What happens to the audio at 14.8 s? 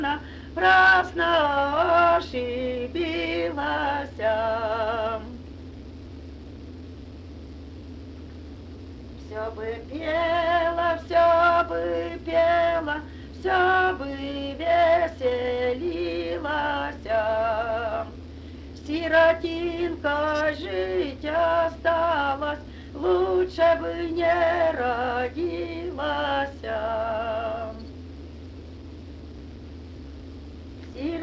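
Nothing goes wrong at 14.8 s: the audio carries on intact through that moment, still passing through the call codec path, with nothing heard above 8 kHz.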